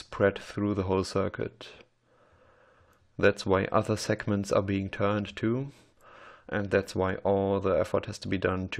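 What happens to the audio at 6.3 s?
Nothing goes wrong at 6.3 s; the audio plays through that moment intact, with no dropout, click or distortion.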